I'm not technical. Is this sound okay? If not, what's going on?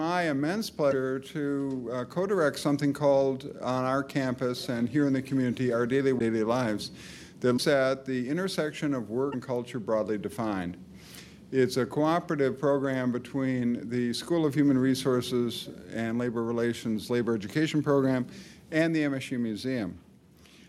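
No. A broken MP3 bit reservoir at 0.90–0.93, 6.18–6.21, 7.56–7.59 and 9.31–9.34 s produces a tiny glitch of about 30 ms each time, where the sound skips ahead. MP3 files save space by letting each small slice of audio borrow room from the slices before it. The likely cause is that slices went missing, so the next one reached back for its borrowed data and found the wrong material, garbling that brief moment.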